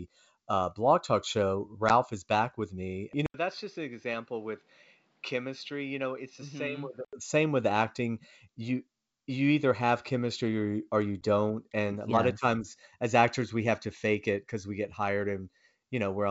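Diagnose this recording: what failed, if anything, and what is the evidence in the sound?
The network stage shows packet loss on an ADPCM call. At 1.89 to 1.91 s and again at 11.21 s, the speech drops into a sharp-edged silent hole. Each hole fits one lost packet of about 10 ms. When the sound resumes, there is brief distortion. The decoder's predictor and step size no longer match the sender's, so it takes some tens of milliseconds to settle.

From 3.26 to 7.13 s, the speech turns dull and boxy, with nothing above 6.2 kHz. It drops about 10 dB in level. A new noise floor sits roughly 35 dB below it, and an 80 ms silence marks the change. This is likely an input switched to a poorer device at the driver stage. Around it, the speech is clear up to about 7 kHz with a light upper-band hiss, which fits G.722 wideband telephone coding at its full rate.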